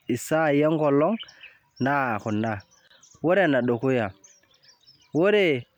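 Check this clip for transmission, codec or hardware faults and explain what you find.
One codec fault is present, a gap at a join of encoded pieces. From 2.88 to 2.90 s, the speech drops out for about 29 ms. Each piece was encoded separately and joined untrimmed. Encoder start delay and last-frame padding remained. The silence has smeared edges, and the speech then resumes where it stopped.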